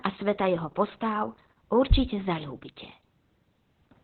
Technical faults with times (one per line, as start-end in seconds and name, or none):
0.00-4.03 Opus voice compression